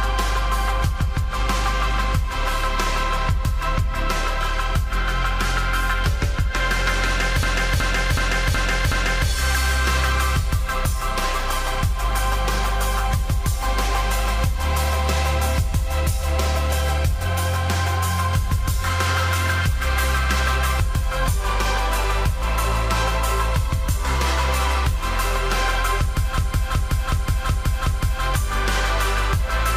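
At 7.43 s and again at 26.38 s, a system hang loop takes over for about 1.86 s: the system stalled while the hardware kept replaying its ring buffer, so one 0.37 s chunk repeats five times at 2.69 Hz, which fits a 16384-sample buffer. It sounds like a stuttering machine-gun judder. A waveform shows five identical blocks side by side, and a spectrogram shows the same pattern tiled with hard vertical seams. Almost no audio seems lost afterwards.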